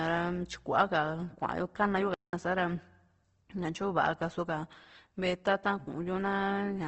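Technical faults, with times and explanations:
Throughout: Opus compression. The speech sounds grainy and rough rather than swirly. Every band keeps its energy, but with few bits the fine detail is replaced by folded copies of lower bands or by noise. Nothing remains above 8.2 kHz, which fits a wideband setting at a low rate of about 16 kbps, and the likely cause is an Opus encoder in its CELT mode. A spectrogram shows a hard ceiling at 8.2 kHz and speckled, noise-filled bands below it.
2.14 to 2.33 s: playback stall. The speech cuts off in mid-flow and the output falls to silence for about 190 ms, then resumes. The likely cause is the player running out of buffered data or its thread being blocked until it recovered. On a waveform this appears as a flat line between 2.14 and 2.33 s with abrupt edges on both sides. A spectrogram shows a clean vertical gap across all frequencies.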